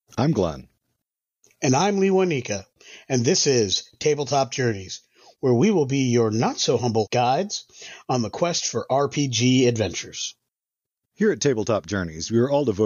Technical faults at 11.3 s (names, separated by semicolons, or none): none